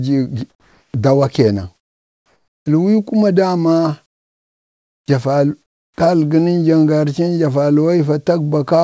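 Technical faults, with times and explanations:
0.50–0.94 s, 1.76–2.66 s, 4.06–5.08 s and 5.62–5.98 s, comfort noise in place of the background: in each gap the real room sound gives way to a smooth, featureless hiss, about 6, 9, 21 and 15 dB quieter respectively, ending just before "dawa keenan" and starting again right after it. The likely cause is discontinuous transmission: with no speech detected, the sender went quiet and the receiver synthesised roughly shaped noise until speech returned.
0.91–0.94 s, onset clipped by the voice detector: the first 30 ms of "dawa keenan" are missing, so the word starts abruptly, without its soft lead-in. The synthetic fill runs right up to that point. This is likely because the sender's voice detector reacted late to the return of speech. That beginning was never sent, and the receiver kept playing comfort noise in its place, with nothing above 8 kHz in the call audio around it.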